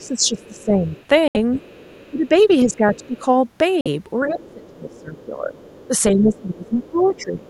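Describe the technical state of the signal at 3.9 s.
At 3.9 s the speech has just come back from a Bluetooth dropout spanning 3.81 to 3.87 s. The audio cuts to silence with abrupt or briefly faded edges, then resumes further along, as if it played on unheard. Packets likely failed to reach the headphones in time and were discarded.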